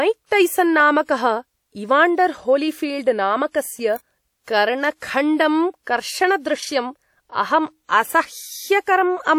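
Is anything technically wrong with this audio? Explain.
Yes. Two sharp snaps sit on top of the speech, at 0.80 s and 3.96 s. Each is an electrical switching spike, likely from a nearby switch, motor or static discharge arcing into the audio line. On the waveform each appears as a narrow spike, and on the spectrogram as a thin vertical line across the frequency range.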